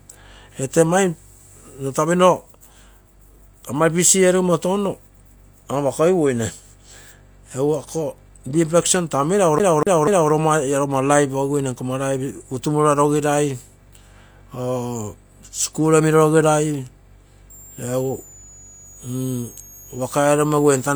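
Speech clip with two faults. From 9.59 to 10.32 s, a CD stuck on one turn repeats the same 244 ms slice three times, muting briefly at each jump. From 17.50 s to the end, a switching supply whistle sits near 7 kHz, drifting between 6.52 and 7.52 kHz, about 25 dB below the speech.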